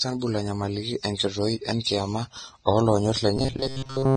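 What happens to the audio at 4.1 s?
At 4.1 s you're inside a stretch of robotic sound from repeated short buffers, running from 3.37 s to the end. The speech collapses into a stiff metallic buzz at 134 Hz, likely from playback looping roughly 7.5 ms chunks because fresh audio arrived too slowly, so most of the real signal gets skipped.

Under that there's the low-bitrate audio saved at a high bitrate problem, with the artefacts of the first encoding still present. That likely points to a low-bitrate encode later re-saved as a high-bitrate MP3, which can't restore what was lost.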